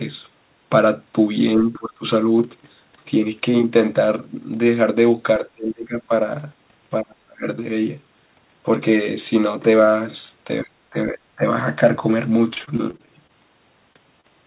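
Between 1.59 and 2.04 s, 5.39 and 6.1 s, 7.03 and 7.45 s, and 10.63 and 11.43 s, the speech sinks in level, by about 20, 25, 30 and 25 dB at the deepest points, for roughly half a second or less each time. This is speech suppressed in double talk, likely caused by an echo canceller that could not tell the near talker from loudspeaker echo while both sides spoke, so it pulled everything down. On a waveform these show as sudden pinched sections of envelope. A spectrogram shows the bands fading or breaking into pieces, with the upper harmonics going first, all under the 4 kHz ceiling of the G.711 call path.

From 12.54 to 13.31 s there is repeated packet loss with a robotic sound. Over that stretch the receiver keeps hitting small holes, which fits around eight of them, the longest about 22 ms. It patches each one by extending the previous sound, so about a fifth of the span is synthetic. 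The result is choppy, with pieces missing. A spectrogram shows short repeated, frozen-looking harmonic slices and small seams across the bands.

At 13.93 to 13.97 s and 14.21 to 14.26 s there are two instances of short concealed packet loss. Each replaces roughly 20 ms of missing audio with a continuation of the preceding sound, heard as a brief smear or wobble. On a spectrogram each looks like a thin vertical stitch where the texture briefly goes smooth or repetitive.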